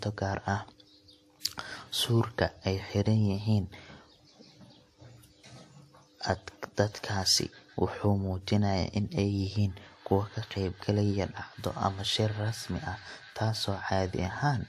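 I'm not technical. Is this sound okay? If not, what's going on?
No. The speech was most likely squeezed by one compression format and then squeezed again by a different one, which is called transcoding between lossy codecs. Each round throws away detail and leaves its own small flaws, and the second round also has to spend effort copying the first round's flaws. Throughout the whole clip, that leaves nothing above about 14 kHz, with two kinds of compression flaws layered together.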